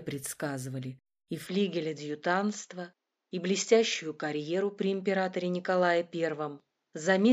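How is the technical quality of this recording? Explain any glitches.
The recording has one fault: at 1.47 s the sound abruptly loses its top end and stays band-limited through to the end. This is most likely an input switched to a poorer device mid-recording. From that point nothing is present above 7.6 kHz, so the audio sounds duller and boxy. The switch leaves no gap and no obvious jump in level. A faint new background noise, well below the signal, accompanies the second device.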